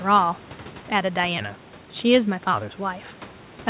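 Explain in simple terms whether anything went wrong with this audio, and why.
Nothing went wrong with this audio, because everything you hear is simply how it normally sounds on its way through.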